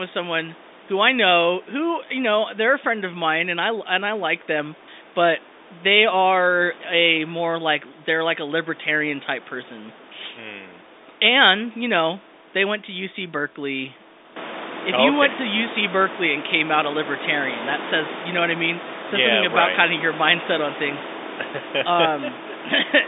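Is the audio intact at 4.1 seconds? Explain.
Yes, the audio is intact at 4.1 seconds, with no fault to be heard at that moment.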